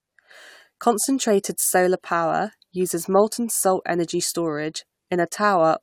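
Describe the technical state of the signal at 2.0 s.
At 2.0 s the speech signal is intact, with no audible technical fault at that moment.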